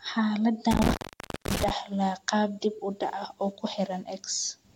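At 0.71 s the speech drops out, and the fault runs until 1.7 s. This is an intermittent contact. A loose plug or cable connection briefly lost contact, breaking the signal path. The line stays open for about 540 ms in total. Crackle marks the edges where the contact scrapes and breaks. Between them faint hiss remains. The speech returns just before "qaab dib u dhac".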